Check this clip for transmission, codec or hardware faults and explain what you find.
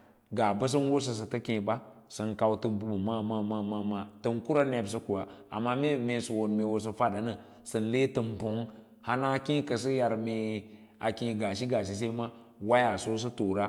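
Nothing in the clip stood out on listening.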